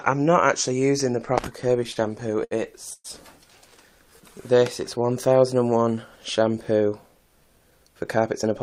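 Between 1.83 and 2.53 s the audio suffers repeated stalls, a stutter. Packets reached the receiver late or too slowly six times in a row, so the jitter buffer kept running dry, and each time the last sound was continued until data resumed. Together these fills add 138 ms, the longest 69 ms, about a fifth of that stretch. Nothing is lost, but the sound hitches and drags. Unlike a single freeze, the stops recur in quick succession.

At 2.93 s the audio stops for a single longer stretch, a call audio freeze, lasting until 3.06 s. The last sound is held as a fading buzz or hiss for about 113 ms, and the final 40 ms of that goes silent before the audio picks up exactly where it stopped. The likely cause is packets held up in transit that emptied the buffer. The gap adds 113 ms of delay with nothing missing. It is one clean hold rather than a string of hitches.

From 3.99 to 5.34 s a jitter buffer slow-down stretches the audio. 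The receiver, building its reserve back up, repeated individual pitch periods and small slices of pauses over and over, adding 114 ms so the passage plays at 92% speed. Pitch does not drop, which separates this from a slowed-down tape, but sounds are drawn out. There are no stops, only a gradual drag.

From 7.26 to 8.51 s the opposite happens, a jitter buffer speed-up. Too much audio had accumulated in the buffer, so the receiver trimmed out short pieces one or a few pitch periods long, roughly 70 ms in total, and the passage runs at 106% speed. The pitch stays put while the timing tightens, giving a slightly hurried feel. It is the mirror of the earlier slow-down and has no gaps or held sounds.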